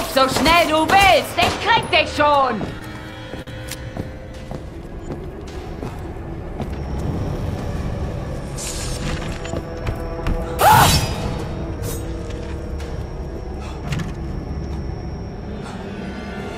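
From 2.41 to 3.50 s, packets arrived late and the jitter buffer ran dry five times, producing repeated stalls (stutter). Each gap, the longest 46 ms and 94 ms in total, was bridged by extending the preceding sound, so nothing is lost but the audio catches and drags.

From 4.14 to 6.66 s, a jitter buffer slow-down builds up reserve by repeating single pitch periods or slivers of pauses, adding 142 ms. Playback runs at about 95% speed with the pitch unchanged, so sounds stretch out.

From 8.75 to 10.41 s, the buffer held more than its target, and a jitter buffer speed-up trims short pitch-period pieces, roughly a tenth of a second in all. The audio plays at about 105% speed at the same pitch, sounding slightly rushed.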